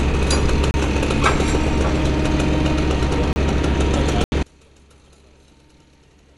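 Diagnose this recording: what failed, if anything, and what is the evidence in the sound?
Throughout, the sound is dull and band-limited, with nothing above about 11.4 kHz and a rough, fluttering grain clinging to tonal parts. This is plainly audible codec damage, most likely from Dolby Digital compression at a low bitrate, consistent with around 64 kbps. At that rate the AC-3 encoder trims the top of the spectrum and starves many frequency lines of mantissa bits. The decoder then fills those lines with dither noise, which is the source of the flutter.

Three hard dropouts cut the audio to dead silence: 0.71 to 0.74 s (about 30 ms), 3.33 to 3.36 s (about 31 ms), and 4.24 to 4.32 s (80 ms). These are blocks of digital silence, most likely from the driver or buffer stage. The output buffer was probably not filled in time, so zeros went out in place of samples.

From 4.43 s to the end, summing to mono makes the sound collapse by about 32 dB, leaving only a faint residue of whatever differs between the two sides. 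That behaviour points to one channel inverted, likely a polarity swap in wiring or at playback. With one side's polarity reversed, everything common to both channels cancels when they are added together, and only the difference signal survives.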